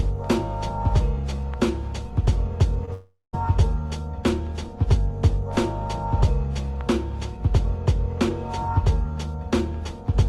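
A brief smear or wobble from 2.85 to 2.89 s is short concealed packet loss: about 20 ms failed to arrive in time, and the receiver bridged the gap by extending the preceding sound. From 2.93 to 3.35 s, a fading buzz or hiss gives way to roughly 180 ms of silence before the audio resumes further on. This is likely a long network dropout that lost about 400 ms.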